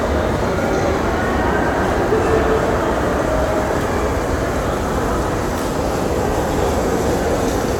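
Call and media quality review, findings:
No audible defects found in this everyday-sound recording; no dropouts, timing breaks or level anomalies to log.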